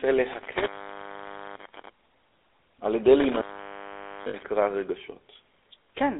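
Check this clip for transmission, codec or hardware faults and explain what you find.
Two faults are present. The GSM full-rate codec runs throughout. Its pulse-driven vocal-tract model, consistent with the 13 kbps full-rate coder, discards fine detail, leaving plainly audible buzzy, gravelly roughness within a 0.3 to 3.7 kHz line band.

Lost GSM frames occur from 4.28 to 4.35 s. For 60 ms, about three frames' worth, the decoder repeats the last good frame, producing a brief rough, metallic ring.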